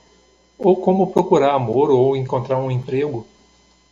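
Nothing in the speech recording counts as a technical fault, so there's nothing to flag here.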